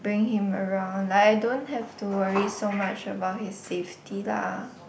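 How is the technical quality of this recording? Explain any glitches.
The technical quality of this recording is sound, with no glitches to explain.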